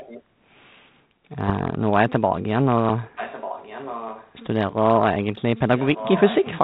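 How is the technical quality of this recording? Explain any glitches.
Two brief glitches stand out on a speech path whose top end stops near 4 kHz, consistent with G.726 ADPCM at 32 kbit/s.

From 0.0 to 0.23 s there is an echo leak: a faint delayed copy of the speech, about 20 dB below the main level and trailing by roughly 1.19 s. The likely cause is a speakerphone whose echo canceller let some of its microphone pickup return down the line.

From 1.46 to 1.51 s there are bit errors on the ADPCM link, at a rate of roughly a third of a percent across a few frames. Each flipped bit throws off the decoder's step size and predictor, producing a short rough burst with pops and a brief level jump.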